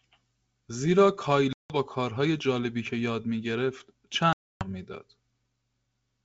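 Packet loss on an ADPCM call leaves silent holes at 1.53–1.76 s and 4.33–4.68 s, with the decoder's predictor briefly out of step, so the speech returns slightly distorted.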